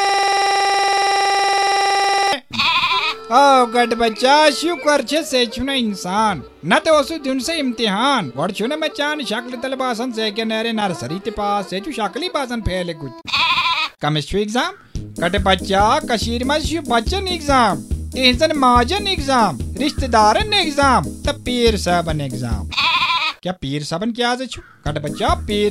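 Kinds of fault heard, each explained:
System hang loop: From the start to 2.33 s, one 46.44 ms slice repeats at 21.5 Hz, a steady buzz at the loop rate that fits a 2048-sample buffer.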